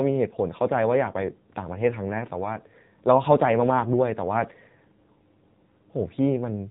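Throughout this speech clip the audio sounds muffled, buzzy and synthetic, with nothing above 4 kHz: AMR narrowband mobile codec damage, which fits a low mode around 7.4 kbps.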